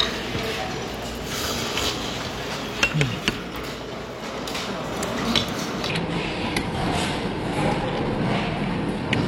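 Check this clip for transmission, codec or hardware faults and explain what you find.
One fault is present: a section at the wrong speed. From 5.89 s to the end, playback runs at 0.717 times the original rate, most likely from being clocked at the wrong sample rate, so the sound slows and drops about five semitones in pitch together.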